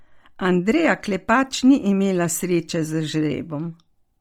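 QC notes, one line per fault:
Throughout, Bluetooth LC3 compression: the speech carries a heavy breathy, grainy edge, and its upper range sounds hissy and smeared. The likely cause is the LE Audio LC3 codec running hard, at a rate consistent with about 32 kbps. Much of the upper spectrum is dropped and refilled with noise. A spectrogram shows patchy, flat noise blocks above the harmonics, with block-wise smearing that fits 10 ms frames.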